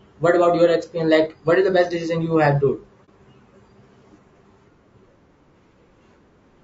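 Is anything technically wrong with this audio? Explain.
Yes, there are two faults in this speech. Throughout, the voice sounds rough and grainy, with noise filling the gaps between harmonics and a thin, synthetic top band. This is likely low-delay AAC compression at a bitrate around 32 kbps, too low to code the spectrum cleanly. Unlike background hiss, the grain follows the voice.

From 3.05 to 3.10 s there is AAC frame loss with muting. About 30 ms of sound vanishes, which points to one lost frame zeroed by the decoder. Overlapping windows fade it out and back in, leaving a brief dip.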